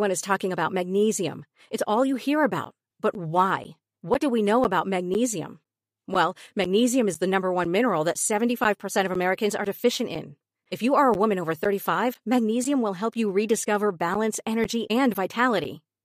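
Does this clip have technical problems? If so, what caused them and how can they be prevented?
Yes. From 2.65 s, right after "all you hear", to 15.65 s, the speech carries periodic USB or driver dropouts: every 0.5 s a gap of around 10 ms drops to silence, roughly thirty times, heard as evenly spaced ticks that sound only when the speech is present. Something is stalling the USB bus or audio driver on a fixed schedule. The strict 0.5 s spacing distinguishes this from random buffer underruns. Prevention: find and disable the periodic background task, or use a larger driver buffer.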